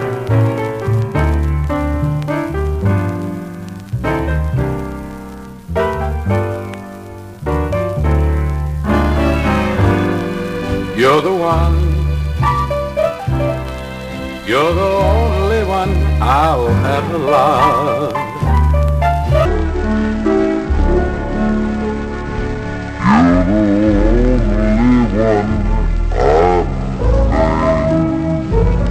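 From 19.45 s to the end, a section at the wrong speed runs at 0.55x, likely from a clock mismatch. Pitch falls roughly ten semitones and tempo drags together, unlike a pure pitch shift.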